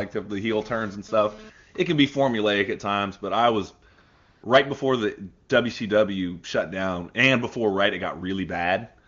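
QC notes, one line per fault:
3.93–3.97 s, 4.01–4.43 s and 5.47–5.49 s: AMR comfort noise. After "times but I was" and before "right before the", speech frames stop for 40 ms and then 420 ms. After "right before the", they stop for 20 ms. The receiver fills each gap with a steady, smooth synthetic noise built from a coarse level and spectrum estimate. That replaces the real background, and the noise switches in and out.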